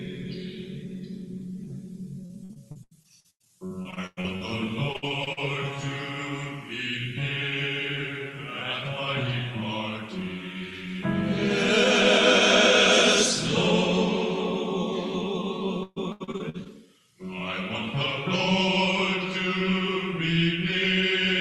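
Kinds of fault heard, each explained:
Repeated packet loss (robotic sound): packets arrive late or go missing in quick succession, and each hole is bridged by extending the preceding sound. The audio turns choppy at 2.25–4.43 s, 4.93–5.39 s and 15.83–16.67 s, with gaps up to 133 ms.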